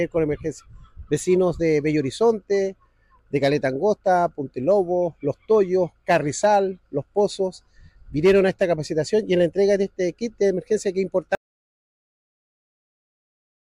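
At 11.35 s the sound cuts off abruptly and never returns, an audio dropout to silence that runs to the end. On a waveform the trace collapses to a flat line; a spectrogram goes fully black, with no room tone, likely from a lost input or stray mute.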